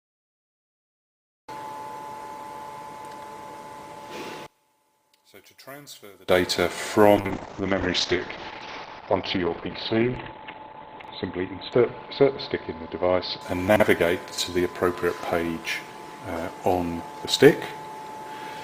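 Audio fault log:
4.46–6.29 s, one channel inverted: One stereo channel has likely had its polarity reversed, so content common to both sides cancels when they are summed to mono. The level falls by about 27 dB, leaving only a faint remnant made of what differs between the channels.
7.17–15.22 s, call bitrate drop: The call's bandwidth estimate collapsed and the encoder fell from 48 kbps to 11 kbps, holding the lowest rate for 3.99 s. Coarser coding and a cut-off dropping from 20 kHz to 4 kHz make the sound rough and muffled until it recovers.
11.0–11.08 s and 13.68–13.8 s, chunks out of order: 40 ms chunks of audio arrived late, by one chunk and then by two, and played after material that should follow them. Nothing is lost, but three hard joins each time produce brief jumbled moments.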